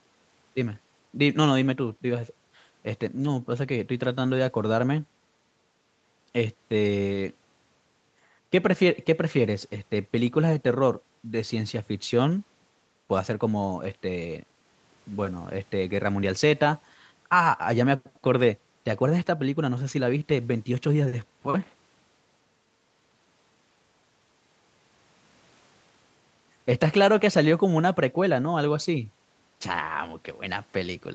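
No technical faults can be heard anywhere in the speech.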